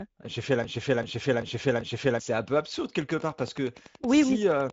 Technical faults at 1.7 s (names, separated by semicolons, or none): Speex codec; broken-record loop